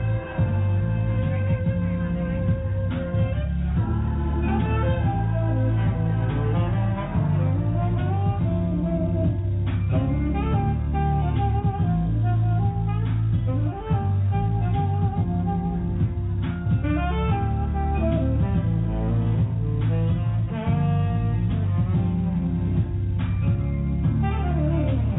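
No technical faults are audible.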